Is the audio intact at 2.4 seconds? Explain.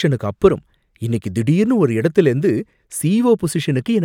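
Yes, the speech at 2.4 seconds plays through intact, with no audible fault at that moment.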